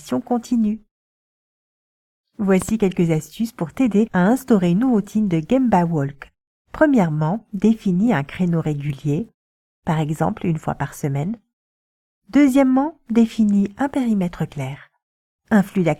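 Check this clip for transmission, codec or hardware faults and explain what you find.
One hardware-type fault is present. From 2.62 to 2.71 s there is a loud pop: two sharp clicks, roughly 10 dB above the sound, likely from a voltage spike such as a plug or switch transient.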